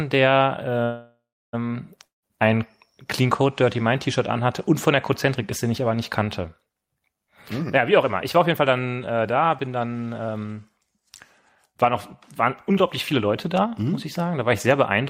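From 0.83 to 1.55 s, just before "ähm ein", there is a call audio freeze. The last sound is stretched into a fading buzz or hiss that ends in about 0.32 s of silence, likely because held-up packets emptied the jitter buffer. Speech then resumes where it stopped with nothing missing, which sets it apart from a dropout.

Right after "der ähm", from 2.05 to 2.24 s, a long network dropout sounds similar: a fading continuation, then about 0.15 s of silence. Here, likely from audio that never arrived, about 180 ms of speech is gone when it returns.

Jitter buffer speed-up runs from 7.28 to 11.10 s at 109% speed (roughly 0.4 s trimmed), from 11.66 to 11.94 s at 110%, and from 12.42 to 13.80 s at 107%, ending before "muss ich". Speech sounds hurried while pitch stays unchanged, because short pitch-period pieces are cut rather than the audio being resampled.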